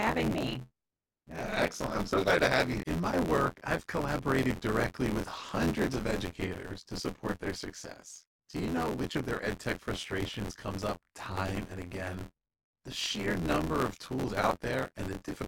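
Throughout the speech, buffer tearing: writer and playback pointers have slipped and cross every period, so roughly a third of each buffer replays audio about 20 ms stale. The hard joins give a robotic 86 Hz rattle, fitting a 512-sample buffer, heard only while sound plays.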